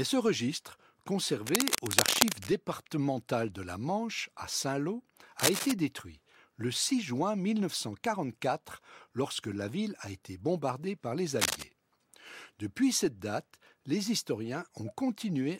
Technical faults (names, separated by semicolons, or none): cable scratch noise